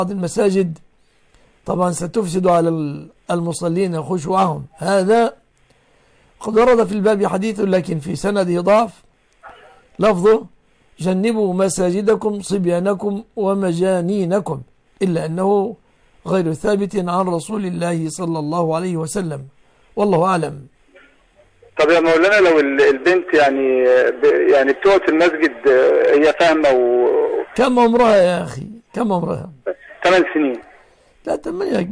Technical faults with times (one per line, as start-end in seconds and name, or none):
none